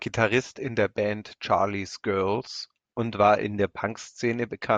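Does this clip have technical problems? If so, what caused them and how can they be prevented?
No, the speech signal has no audible technical fault anywhere in it.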